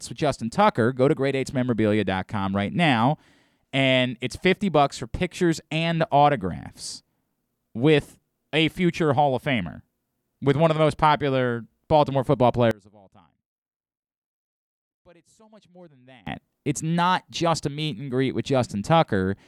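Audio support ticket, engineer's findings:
One channel inverted, 12.71–16.27 s. Speech drops by about 30 dB on mono fold-down, leaving a faint residue. Centred content common to both channels cancels when summed; only the L/R difference survives. Likely a polarity flip on one leg of the stereo path, e.g. a miswired balanced connection or an inverting stage on a single channel.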